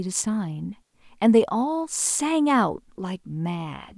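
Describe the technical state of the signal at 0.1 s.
At 0.1 s the signal is intact, with no audible fault at that moment.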